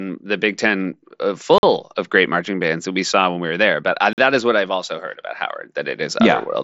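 Gap between chunks at 1.58 s and 4.13 s in this speech: two silences of 48 ms, 2.5 s apart, just before "of great marching bands" and "that is what I've". They come from the audio being delivered in 2.5 s blocks with silence left at each join, heard through a wideband Bluetooth mSBC path that carries nothing above 7.7 kHz.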